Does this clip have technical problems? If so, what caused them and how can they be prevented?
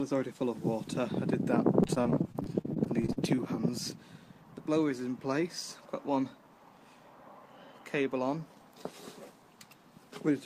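Yes. From 1.83 to 3.18 s there is repeated packet loss (robotic sound): 15 gaps, the longest 43 ms, each patched by continuing the preceding sound. Unlike a single dropout, the holes recur in rapid succession, making the audio choppy. A larger jitter buffer with forward error correction would prevent it.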